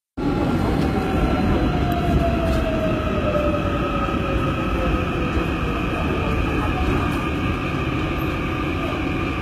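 From start to finish the treble has a synthetic, gritty sheen, with bright content sounding metallic rather than crisp. This points to HE-AAC compression as the likely cause, at a low rate that fits roughly 20 kbps. The upper band is rebuilt by copying lower bands upward, so its harmonics fail to line up. On a spectrogram the treble shows repeated, blocky patches above the crossover and a hard ceiling at 14.8 kHz.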